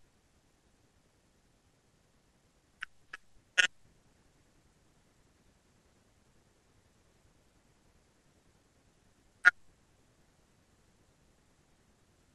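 No technical faults are audible anywhere in the speech recording.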